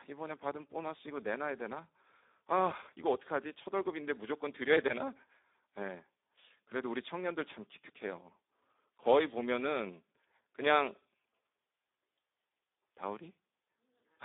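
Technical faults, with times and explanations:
Throughout, Speex codec damage. The speech sounds hoarse and noisy. Too few bits describe the excitation, so it is rebuilt crudely, which fits a rate near 8 kbps. Sound sits within 250 Hz to 3.7 kHz, with nothing above 3.8 kHz.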